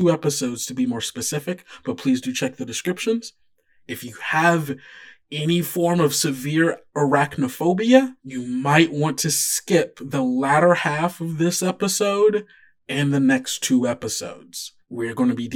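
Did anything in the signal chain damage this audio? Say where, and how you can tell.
Yes. The speech sounds hollow and phasey from start to finish, with fixed notches starting at around 40 Hz and spaced roughly every 100 Hz. This is channel delay (comb filtering): one channel arrives about 10 ms late in a buffer stage, and summing to mono cancels evenly spaced frequencies.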